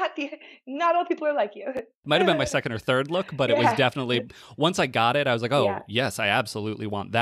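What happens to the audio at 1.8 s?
Right around 1.77 s there's a case of chunks out of order. One short slice of the speech, roughly 5.8 ms long, lands two chunks late, so it plays after the two slices that should have come after it. Nothing actually goes missing; the pieces are just shuffled. You hear it as a tiny jumbled blip, with three hard joins where the misplaced slices butt together and don't line up.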